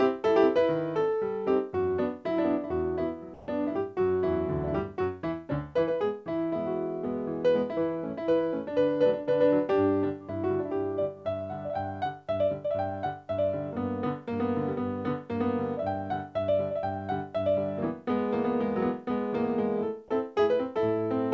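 From 3.34 to 3.48 s, about 140 ms of background gives way to a flat, featureless hiss roughly 3 dB quieter, comfort noise in place of the background, likely from the sender pausing transmission and the receiver filling in synthetic noise. Everything sits below an 8 kHz ceiling, which fits a wideband call codec.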